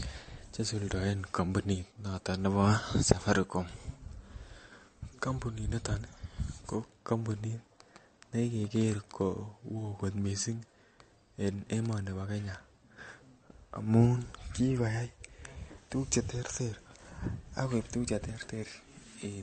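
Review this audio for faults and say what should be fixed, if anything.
MP3 compression runs throughout the speech. Nothing survives above 8.6 kHz, so the treble is cut off flat and s sounds lose their edge, and the remaining sound has a plainly audible watery, swirling quality. The likely cause is an MP3 encoder starved of bits, which fits a rate of around 42 kbps: it drops the top of the spectrum and zeroes weaker frequency lines, which then flicker on and off between frames and smear consonant attacks. Prevent this by encoding speech at a higher bitrate, or by keeping a lossless master and compressing only once at the end.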